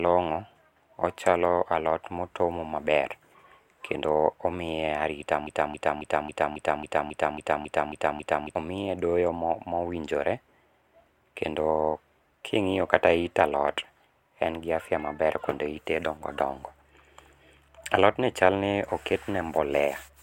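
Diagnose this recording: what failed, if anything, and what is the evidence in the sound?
A broken-record loop from 5.47 to 8.55 s: a short chunk of speech about 273 ms long plays back to back, 11 times, identical each pass, before normal speech picks up again at "omiye doyo mowinjore". That's roughly three seconds where the real audio just isn't there. It's most likely a stall in the playback or streaming buffer, where the player kept re-sending the last fragment it had until fresh data arrived.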